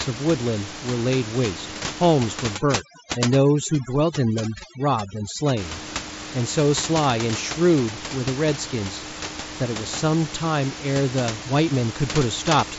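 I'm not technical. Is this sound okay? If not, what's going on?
No. From about 2.56 to 5.57 seconds there is overdone noise removal. A cleanup tool pressed too hard on the background noise. It also erased the quiet parts of the speech. The background drops and breaks up into twinkling specks.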